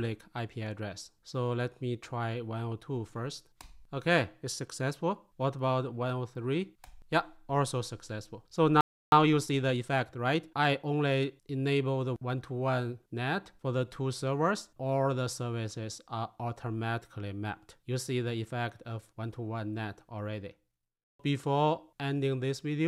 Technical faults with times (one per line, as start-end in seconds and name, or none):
8.81-9.12 playback stall
9.12-11.20 time-compressed catch-up